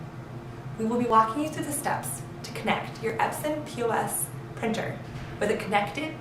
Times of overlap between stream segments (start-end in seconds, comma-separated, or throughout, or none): 1.10, 3.10